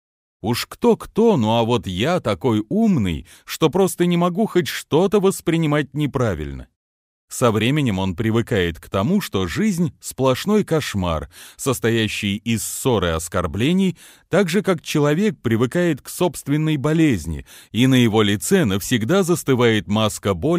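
Nothing in this audio stands out as a technical fault; it just runs along without any glitches worth pointing to.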